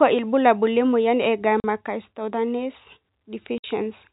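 At 1.6 s the speech drops out for 40 ms, then again at 3.58 s for 60 ms. That's packet loss filled with silence: missing packets replaced by dead air, with hard edges. Both gaps fit 20 ms packets over the narrowband G.711 telephone line.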